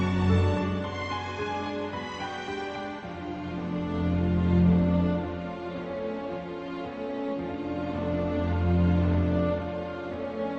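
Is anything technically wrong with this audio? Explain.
No, nothing is technically wrong here: the audio has the ordinary character of a WebRTC call path, with the top end stopping at about 8 kHz in a way that fits Opus at around 24 kbps.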